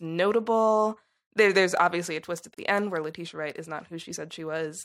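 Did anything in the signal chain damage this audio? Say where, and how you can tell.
Yes. At the codec stage, a gap at a join of encoded pieces opens at 2.54–2.58 s, between "obviously a twist at" and "the end where": a gap of about 35 ms, with pieces joined every 4 s. On a waveform it's a flat notch with smeared edges, and on a spectrogram a vertical blank band. Each separately encoded piece kept its start-up delay and end padding untrimmed, so the speech halts and resumes where it stopped.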